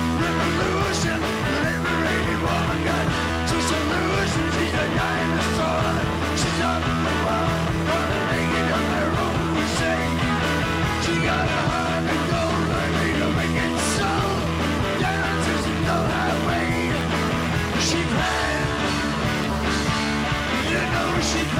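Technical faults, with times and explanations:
0.81 s to 21.06 s, clock drift buffer slips: a short click or pop recurs every 0.81 s, around thirty times across this span, heard wherever signal is present. The strict regularity likely comes from two devices running on independent clocks that disagree by roughly 200 ppm, so the buffer between them creeps toward overflow or underrun until a few samples are dropped or repeated at once. Each slip is small, consistent with about seven samples, which produces the brief discontinuity heard as the click.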